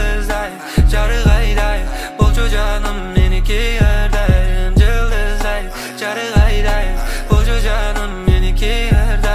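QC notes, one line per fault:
No technical faults were found in the signal.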